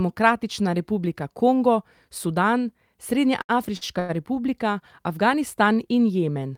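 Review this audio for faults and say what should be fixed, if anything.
Three short stalls from a late packet sit close together in this speech clip, at 3.41 to 3.51 s, 3.77 to 3.83 s and 3.99 to 4.11 s. Each time the jitter buffer ran dry, the receiver held the last sound for 75, 45 and 95 ms, then resumed from the same point, so nothing is lost but the speech briefly drags with a faint buzz or dip. Deeper or adaptive jitter buffering on this link would absorb these late arrivals.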